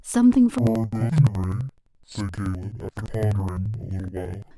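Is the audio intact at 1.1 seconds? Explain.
No, interleaved audio read as planar runs from 0.58 s to the end: each 85 ms block (likely 2048 samples) splits into half-speed halves, so the speech sounds an octave low, doubled and choppy, with seams every 85 ms and compressed harmonic spacing on a spectrogram.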